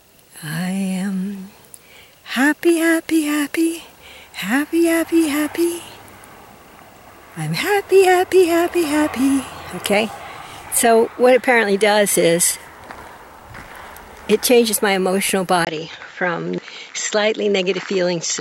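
At 15.65 s the recording likely switched its input to a poorer device, such as a different microphone or a headset in call mode, and the rest of the clip comes through that path. The change opens with a brief 20 ms gap. From then on nothing reaches above 7.6 kHz, so the sound turns duller and loses its airy top. A faint new background noise sits far below the signal, while the overall level stays about the same.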